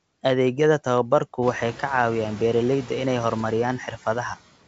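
Noise suppressor artifacts run throughout, cutting steady-noise bands by about 18 dB frame by frame, so the background dips in pauses and rises beneath the speech.

Bit errors on an ADPCM link hit from 3.31 to 3.47 s. Flipped bits derail the decoder's step size and predictor, producing pops and rough bursts that briefly change in level.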